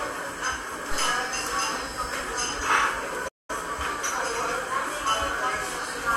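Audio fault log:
0.91–1.20 s, phantom power thump: A supply was switched on a live input, and the voltage step passed through the coupling capacitors into the signal path. It comes through as a deep low-frequency thump that dies away with a decay of about 63 ms.
3.28–3.50 s, playback stall: The player most likely ran short of data or had its thread held up, so output went silent for about 205 ms. The sound cuts off mid-flow, leaving a clear gap before it resumes.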